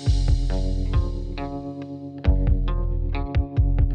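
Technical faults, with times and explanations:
No technical faults can be heard anywhere in this clip. There is nothing here that needs a time or an explanation.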